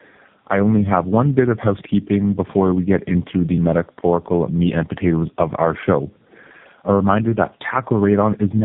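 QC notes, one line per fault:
Throughout, tandem speech coding: the speech has been through about three low-rate speech coders in a row, each re-encoding the previous one's damage, so it's rougher, more muffled and warbly than any single link. Nothing above 3.6 kHz survives.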